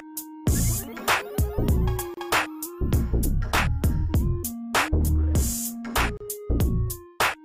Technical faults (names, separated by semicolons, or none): gap at a join of encoded pieces